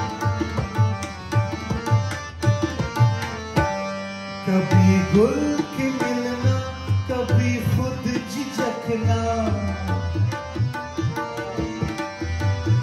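Nothing technically wrong can be heard in the audio at any point.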